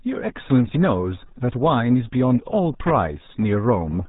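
From start to finish the speech carries the signature of the RealAudio 14.4 codec, whose heavy damage fits a very low bitrate around 8 kbit/s. Nothing above 3.8 kHz survives, so the audio sounds muffled and boxy, with a gargly texture throughout.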